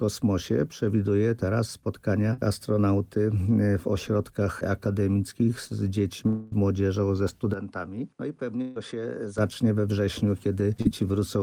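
The recording is a stretch of network-transmitted audio with several transmission faults. At 2.33 to 2.39 s and again at 10.82 to 10.87 s there is short concealed packet loss: about 40 ms of audio failed to arrive each time, and the receiver bridged the hole by extending the preceding sound for 40 ms and 34 ms respectively before crossfading back to the real signal. The result is a brief smear or wobble, and whatever occupied those few hundredths of a second is gone. From 6.27 to 6.54 s the audio is replaced by a synthesized continuation roughly 240 ms long, a held buzz or hiss that decays without ever reaching silence, after which the signal resumes with that span missing. The likely cause is a long network dropout in which the concealment ran for the whole gap rather than handing over to silence. Between 7.54 and 9.38 s the character of the sound changes abruptly with no gap at the switch: everything above 10.5 kHz disappears, the level falls by about 10 dB, and a new background noise appears roughly 45 dB under the signal, giving a duller, boxier tone until the original quality returns at 9.38 s. 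This is most consistent with the input switched to a poorer device, a narrower-band microphone or headset path, for that interval. Inside that section, at 8.62 to 8.77 s, a burst of packet loss removes about 140 ms. The decoder fills it by stretching the last sound and fading it down, heard as a short dying buzz or hiss, then jumps ahead to later audio without any silent gap.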